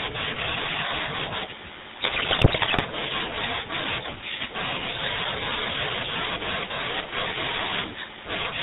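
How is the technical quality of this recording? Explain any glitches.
Poor: the speech is degraded throughout by a low-rate phone codec and breaks up badly once.

Throughout, GSM full-rate codec: it models the vocal tract and drives it with sparse pulses, which fits 13 kbps. Nothing above 4 kHz survives, and the speech sounds buzzy and gravelly. Plain band-limiting would sound muffled but smooth, not rough like this.

From 1.94 to 2.82 s, GSM bit errors: corrupted filter, pitch and gain values bend the spectrum and spike the level frame by frame. The result is squawks, pops and gargling, where packet loss would leave gaps or smoothed repeats.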